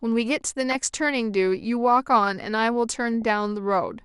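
Right from the start the speech sounds dull and plainly gurgly, with a granular edge. That's MP2 compression, most likely MPEG Layer II running short of bits, which fits a rate around 80 kbps: upper sub-bands drop out and the rest get coarsely quantised.

At 0.71 to 0.75 s, and again briefly at 3.22 s, there's DAB burbling, short blips of noise in single sub-bands. Bit errors, a fraction of a percent, slipped past error correction into 4 and then 6 frames, putting wrong samples into individual sub-bands.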